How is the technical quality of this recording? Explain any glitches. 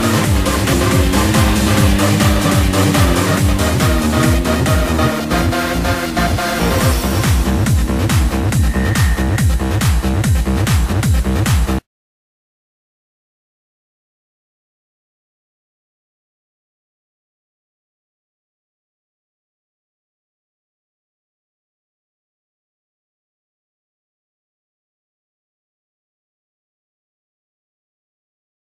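Compressed frames are skipped three times, at 0.72 s, 2.44 s and 10.92 s. At each point whole frames of the encoded stream are dropped, roughly 200 ms, 100 ms and 70 ms of audio. With 23.2 ms frames, that is several frames each time. Because adjacent frames overlap, each join is a short smeared blip rather than a sharp click. A waveform shows an abrupt discontinuity at each join, and a spectrogram shows a brief vertical smear with content jumping ahead.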